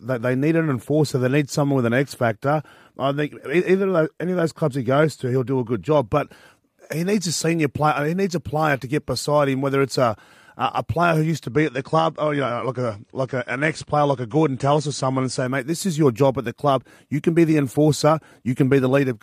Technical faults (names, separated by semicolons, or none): adaptive stream at a lower bitrate